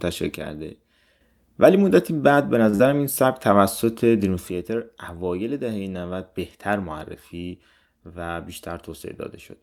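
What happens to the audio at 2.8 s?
Just before 2.8 s the speech briefly freezes: from 2.69 to 2.75 s a sound is held on unnaturally, with a faint buzz or dip, though nothing is actually lost. This is a short stall from a late packet. The next packet hadn't arrived when it was due, so the jitter buffer ran dry and the receiver stretched the last sound for about 38 ms. It then resumed from the same point, leaving the rest of the audio running 38 ms later than before.

Straight after, from 2.75 to 2.81 s, there is a short smear or wobble. This is a short concealed packet loss: about 40 ms of audio never reached the decoder in time. To cover the gap, the receiver extended the preceding sound for roughly 42 ms, continuing its pitch or filling with shaped noise, then blended back into the real signal. Any brief consonant in that stretch can disappear.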